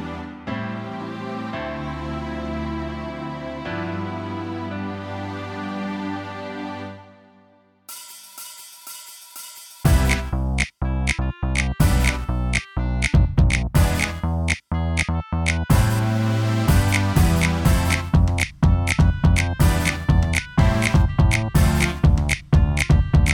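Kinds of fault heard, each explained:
No faults detected; nothing to flag.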